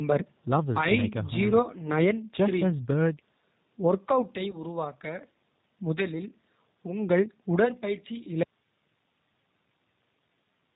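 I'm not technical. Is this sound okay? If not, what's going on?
No, not quite. The whole clip has been squeezed through the G.729 codec, a very compact phone-call format that rebuilds the voice from a rough model of how speech is made. Everything above 4 kHz is gone, so the voice sounds muffled and a bit rough and synthetic, as if it's coming through an old phone line. The damage here is easy to hear, though the speech is still intelligible.

There's also a short hiccup at about 4.51 to 4.57 s: VoIP packet loss concealed by the speech codec. About 20 ms of audio went missing, which points to a single lost packet. The decoder patched the gap by stretching out the last bit of sound it had, so you get a brief stretched-out moment. Because each stretch of sound is built on the one before, it takes until about 4.57 s for the voice to sound right again.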